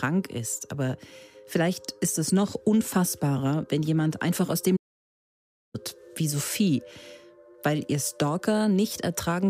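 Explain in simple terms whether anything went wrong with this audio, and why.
A playback stall cuts the sound from 4.76 to 5.75 s, about a second of silence, likely because the player briefly ran out of data.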